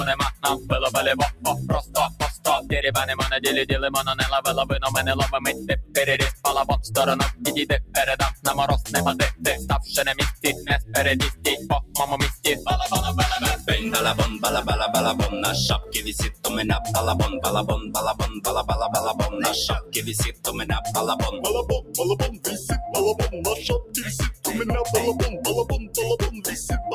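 A noise suppressor built for speech was left running on this audio. It treats sustained tones, ambience and tails as noise, so the level keeps pumping by around 10 dB as held material sinks and attacks pass. The sound was cut by the noise suppressor at 0.34–2.72 s, 5.53–13.68 s, 15.83–16.44 s, 17.82–18.41 s, 19.82–24.44 s and 25.64–26.44 s, with drops of about 8 to 15 dB. Decays are clipped short and sustained passages thin out.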